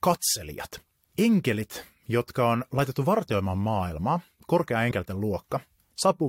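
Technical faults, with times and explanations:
4.90 s, compressed frames skipped: about 20 ms of the speech is missing where whole compressed frames were lost or rejected by the decoder, so the audio jumps forward.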